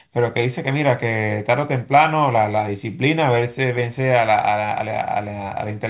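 Nothing stood out as a fault on listening to this speech.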